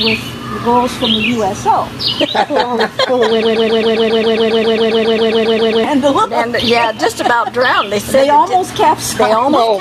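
Gain pumping runs through the whole clip: the gain ducks by around 10 dB under each loud sound, likely from excessive gain hitting a fast limiter. From 3.42 to 5.84 s a broken-record loop repeats one 135 ms fragment 18 times back to back, replacing the audio that belonged there, likely a stalled stream resending its last buffer.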